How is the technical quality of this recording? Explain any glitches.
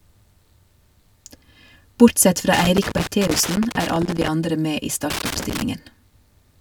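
The speech is marred by loose connector crackle in two bursts. The first runs from 2.53 to 4.28 s, just before "andre med i". The second runs from 5.10 to 5.62 s, right after it. A worn contact keeps making and breaking, chopping the signal into irregular scratchy crackle.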